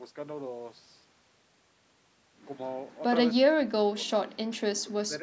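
From 3.4 to 4.24 s, and again from 4.81 s to the end at 5.22 s, the speech sinks by something like 40 dB, about 0.7 s in the first stretch and 0.3 s in the second. This is speech suppressed in double talk, likely an echo canceller that could not split this talker from incoming far-end audio and turned everything down. All of this sits against call-style band-limiting with nothing above 8 kHz.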